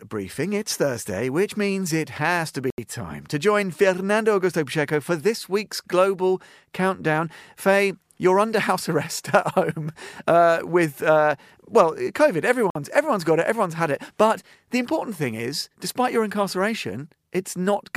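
At 2.70 s, after "means it has to", the speech drops to silence for 79 ms and resumes at "time to join"; at 12.70 s, after "with uh well covid", a 52 ms gap precedes "everyone's got it everyone's". Both are likely Bluetooth stalls, where delayed packets let the headphone buffer run empty.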